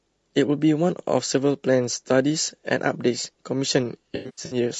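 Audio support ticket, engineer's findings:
Low-delay AAC compression, throughout: likely an AAC-ELD-type low-delay codec, damage consistent with a low rate around 32 kbps. Short frames resolve pitch harmonics poorly, so speech sounds rough and grainy, with noise filling the gaps between harmonics. Plainly audible.

AAC frame loss with concealment, 4.15 to 4.57 s: frames dropped in bursts, about 260 ms lost across 360 ms, the longest gap around a tenth of a second. The decoder patches each gap from the last good spectrum, so speech turns smeared, noisy and phasey in patches.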